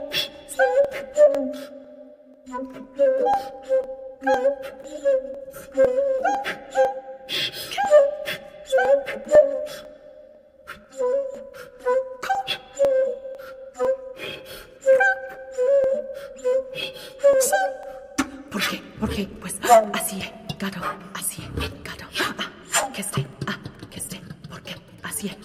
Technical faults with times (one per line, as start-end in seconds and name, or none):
0.35-25.33 periodic USB or driver dropouts